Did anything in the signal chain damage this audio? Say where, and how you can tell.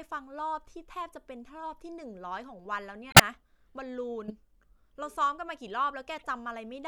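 Yes. The codec stage was hit by bit errors in the compressed stream, and the decoder rejected the damaged frames, producing a corrupt frame muted fault. The player substituted silence, so from 3.10 to 3.20 s the speech drops into a sudden hole about 0.1 s long, which fits several consecutive frames being discarded. The gap starts abruptly rather than fading, and everything after it stays in time, which points to concealment by muting rather than a network stall.

Elsewhere, corrupted frames slipped past the decoder's checks and were played as corrupt frame decoded faults. Misread gain values and spectral codes put energy where the speech has none, so short artificial bursts appear at 4.28 to 4.32 s, peaking at about -30 dBFS, and more faintly at 6.19 to 6.27 s, at about -45 dBFS. Each lasts only a few frames, which matches damage confined to individual codec frames.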